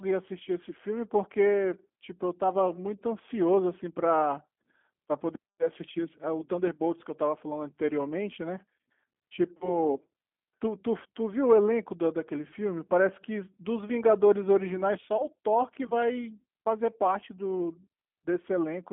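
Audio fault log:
Throughout, G.729 codec: the speech is rebuilt from a vocal tract filter, a pitch predictor and a few pulses per short frame, and it sounds plainly rough and synthetic. Everything sits between 200 Hz and 3.5 kHz, which fits an 8 kbit/s G.729A line.
9.57 to 9.83 s and 15.17 to 15.25 s, VoIP packet loss concealed by the speech codec: the decoder bridged gaps of about 40 ms and 20 ms, which points to two lost packets and then one. It extended the last pitch and filter with falling gain, so the speech is stretched into a buzzy tone or coloured noise that fades. Because each frame builds on the previous one, the weakened, distorted sound lingers past each gap.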